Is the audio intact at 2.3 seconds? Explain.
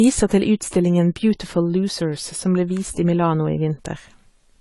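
No. AAC compression runs through the whole clip, likely at around 32 kbps. Nothing sounds above 11.4 kHz, leaving the speech dull, and coarse quantisation of the spectrum smears it, with a warbling or fizzy texture.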